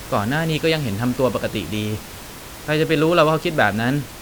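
No technical faults occur at any point in this speech clip; the only background sound is the room noise, which sits about 17 dB below the speech.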